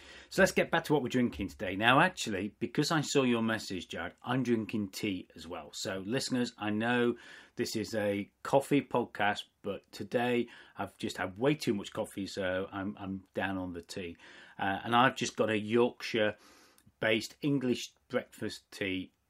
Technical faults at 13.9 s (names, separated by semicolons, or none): none